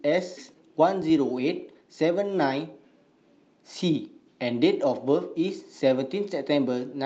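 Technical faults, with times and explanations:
0.37 s: skip ahead, playback jumps forward with no gap, roughly 0.4 s of speech dropped and both sides joined almost directly.
0.47 to 2.74 s: jitter buffer speed-up, short pitch-period pieces repeatedly removed, speech running about 108% speed at unchanged pitch, trimming roughly 0.2 s of backlog.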